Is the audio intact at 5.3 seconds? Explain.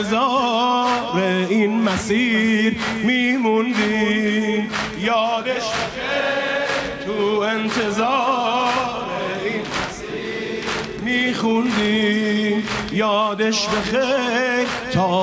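Yes, at 5.3 seconds the audio is intact, with no dropout, glitch or other audible fault at that point.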